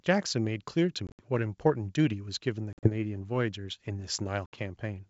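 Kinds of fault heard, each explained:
Packet loss on an ADPCM call: around 1.07, 2.73 and 4.46 s, chunks of up to 70 ms drop to hard-edged silence, shown as blank vertical gaps in the spectrogram and flat waveform. The mismatched decoder state then brings speech back slightly distorted, settling within tens of milliseconds.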